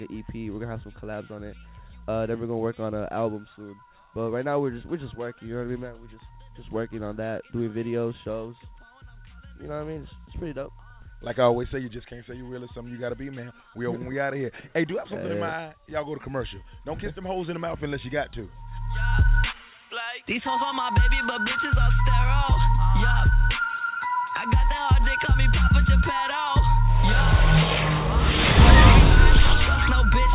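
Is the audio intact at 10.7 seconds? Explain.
Yes, the audio is intact at 10.7 seconds, passing cleanly through the call path with only its narrowband telephone-style character and nothing above 4 kHz.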